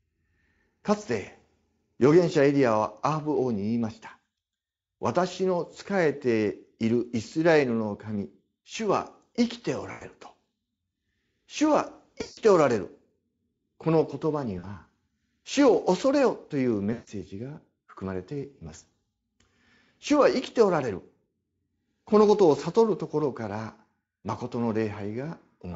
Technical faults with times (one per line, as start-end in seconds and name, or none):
9.91-10.04 VoIP packet loss concealed by the speech codec
12.21-12.39 VoIP packet loss concealed by the speech codec
14.59-14.66 VoIP packet loss concealed by the speech codec
16.93-17.10 VoIP packet loss concealed by the speech codec